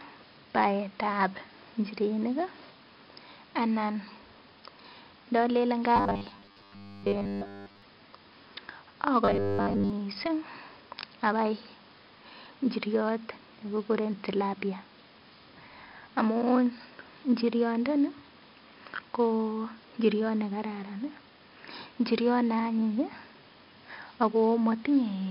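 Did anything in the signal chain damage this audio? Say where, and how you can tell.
Yes. Gritty hiss rides every loud passage throughout: heavy 4-bit ADPCM compression at the codec stage, consistent with roughly 44 kbps.

A rigid metallic 100 Hz buzz runs through the speech at 5.96–7.82 s and 9.25–9.90 s, robotic sound likely from repeated short buffers, with about 10 ms blocks replayed over most of the audio.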